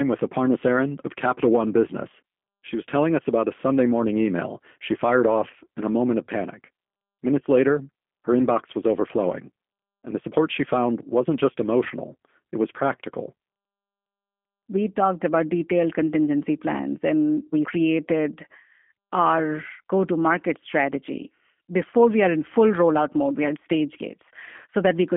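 From start to finish the speech carries the sound of the G.729 codec, the low-rate VoIP coder, at a rate that fits 8 kbit/s. Each 10 ms frame is rebuilt from a vocal tract filter, a pitch predictor and a handful of pulses rather than the original waveform, so the voice comes out plainly rough and slightly synthetic. The band sits within about 200 Hz to 3.4 kHz, with nothing above 3.5 kHz, leaving consonants dull and narrow.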